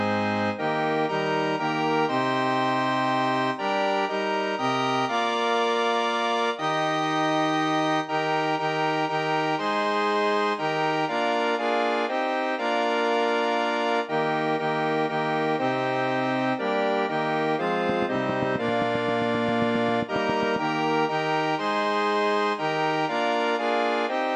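From 17.90 to 20.57 s there's a train of clicks: about twenty near-identical pulses at a steady 7.5 per second, peaking a little above the surrounding sound. It comes across as a regular ticking laid over the audio, most likely interference from nearby equipment injecting pulses.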